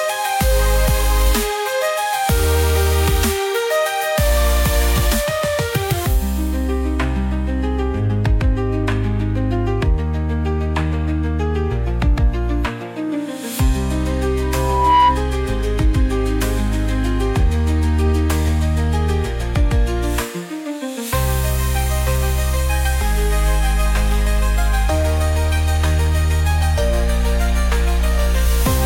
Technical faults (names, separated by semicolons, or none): loudspeaker feedback squeal